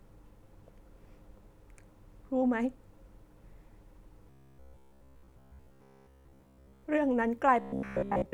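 A rigid, metallic buzz near 67 Hz marks this speech clip from 4.30 to 6.83 s and again from 7.61 s to the end: robotic sound from repeated short buffers, likely from a roughly 15 ms chunk replaying while most of the real audio is skipped.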